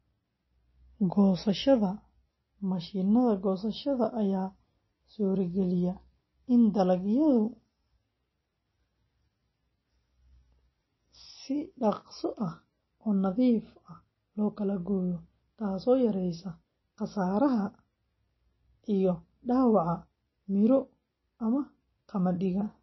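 Likely MP3 compression throughout, at a bitrate that fits roughly 24 kbps, cuts everything above 5.8 kHz, leaving the speech dull, watery and swirly.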